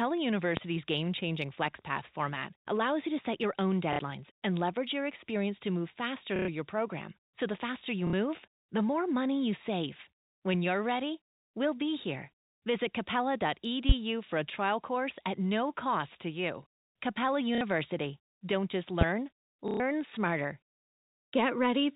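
A speech recording carried over a telephone-band line, limited to below 4 kHz by its G.711 coding, with two kinds of fault. Loud pops hit at 0.57 s, 13.89 s and 19.01 s. Each is a single sharp burst about 20 dB above the speech, lasting close to 40 ms. The likely cause is a sudden voltage step or pulse, from a plug, switch, static discharge or driver glitch, entering the signal path. The speech continues audibly underneath each pop, which separates them from dropouts. Packet loss with the last packet repeated occurs at 3.93 s and 8.07 s (60 ms each), 6.36 s (120 ms), 17.55 s (60 ms) and 19.68 s (120 ms). Here the receiver fills each gap by replaying the previous chunk, so the speech itself is replaced by a short robotic stutter. The repeats buzz at a rate that fits 30 ms packets, around 33 Hz. Unlike the pops, nothing new is heard through them.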